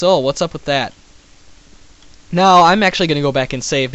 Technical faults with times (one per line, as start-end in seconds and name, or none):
2.60-3.95 resampler restarted on every block